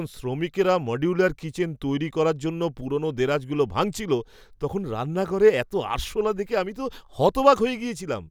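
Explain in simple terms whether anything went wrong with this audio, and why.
Nothing went wrong here; the speech sounds as intended.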